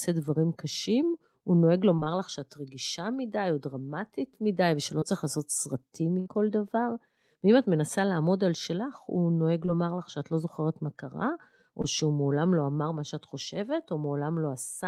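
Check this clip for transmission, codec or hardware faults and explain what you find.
Two transmission faults are present: short concealed packet loss and one burst of packet loss.

Short concealed packet loss occurs at 1.95 to 2.08 s, where three consecutive 20 ms gaps run together, and singly at 5.00, 9.66 and 11.82 s. The receiver extrapolated the preceding sound across each missing 20 ms, heard as brief smears or wobbles.

A burst of packet loss occurs at 6.20 to 6.28 s. About 60 ms never arrived. Concealment stretched the last sound into a fading buzz or hiss before the speech resumed further on.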